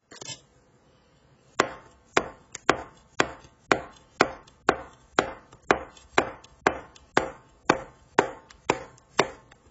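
AAC compression runs through the whole clip, from start to finish. Nothing survives above about 7.7 kHz, and the heavy damage fits a low-rate AAC-LC encode of roughly 16 kbps as the likely cause. At that rate the encoder cannot afford the upper bands, so it cuts them off and quantises what remains very coarsely against its hearing model. The sound comes out dull and smeared, with a warbling, fizzy texture clinging to sustained and noisy parts.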